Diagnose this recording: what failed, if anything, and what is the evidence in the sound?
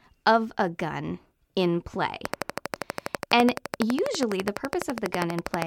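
A steady ticking cuts across the speech from 2.25 s to 5.63 s: a train of clicks, about forty of them at a regular 12.2 per second, peaking roughly 15 dB above the speech. The likely cause is interference coupling into the analogue wiring or a struggling interface.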